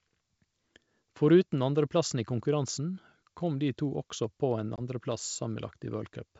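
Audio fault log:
4.76 to 4.81 s, packet loss on an ADPCM call: about 20 ms of the G.722 stream is lost, pointing to a single dropped packet. The hard-edged silent gap leaves the decoder's predictor and step size out of step with the sender's, so speech resumes slightly distorted.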